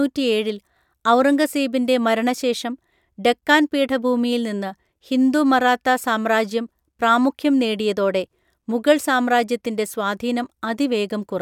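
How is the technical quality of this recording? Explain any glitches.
No audible glitches or faults.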